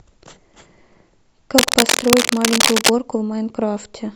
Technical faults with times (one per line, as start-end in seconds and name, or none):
1.58-2.90 cable scratch noise